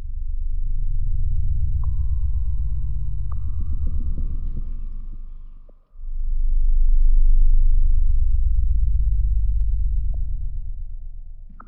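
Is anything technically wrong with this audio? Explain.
Yes. Sharp single clicks sound at 1.72, 3.86, 7.03, 9.61 and 10.57 s in this everyday sound. They are likely dropped samples: a fraction of a millisecond lost, so the waveform jumps abruptly. Each shows as a thin vertical line on the spectrogram.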